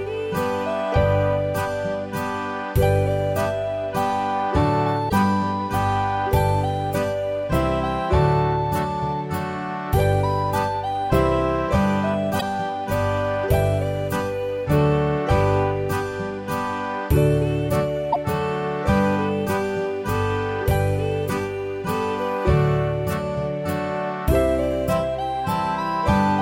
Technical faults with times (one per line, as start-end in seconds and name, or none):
5.06-5.13 damaged data in a compressed stream
12.37-12.43 damaged data in a compressed stream
18.09-18.16 damaged data in a compressed stream